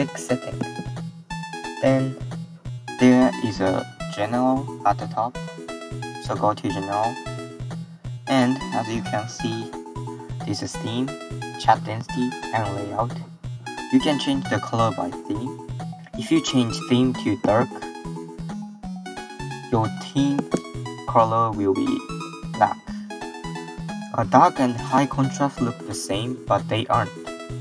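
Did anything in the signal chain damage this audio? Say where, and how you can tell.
No, nothing in the signal chain damaged this audio.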